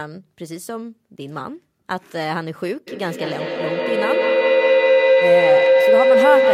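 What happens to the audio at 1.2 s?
Nothing goes wrong at 1.2 s; the speech runs through that moment intact, with no dropout, click or distortion.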